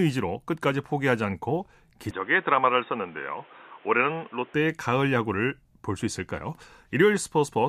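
Input switched to a poorer device, from 2.11 s to 4.54 s: the speech abruptly loses everything above about 3.8 kHz and turns dull and boxy, with a faint new background noise sitting about 30 dB under it, then clears again at 4.54 s. Loudness stays the same and there is no gap at either change. This is likely the recording input jumping to a narrower-band microphone or headset call profile and back.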